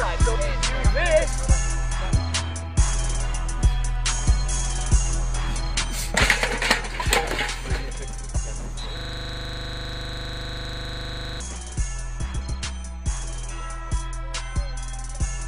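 At 8.97 s the audio locks into a system hang loop that lasts until 11.40 s. The computer or its audio driver stopped supplying new samples, while the sound hardware kept replaying the same 40 ms stretch of its ring buffer. That segment repeats exactly, 61 times, at 25 Hz. The result is a rapid mechanical repetition at that rate, with no new content until normal playback returns at 11.40 s.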